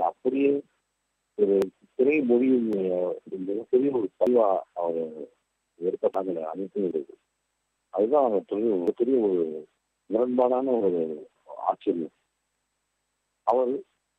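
At 1.62, 2.73, 4.27, 6.14 and 6.91 s the sound skips ahead about a tenth of a second, and at 8.88 s about a third of a second vanishes. Each is likely a dropped buffer (overrun), with the surrounding audio joined directly, without silence.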